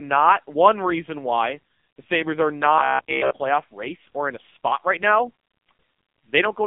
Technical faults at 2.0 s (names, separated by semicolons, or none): AMR narrowband mobile codec